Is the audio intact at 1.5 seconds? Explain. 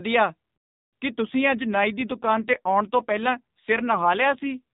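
No, an AMR rate drop runs from 1.26 to 4.61 s: the voice turns rougher and buzzier, fitting a fall from 12.2 to 5.9 kbps, yet the band holds and nothing drops out.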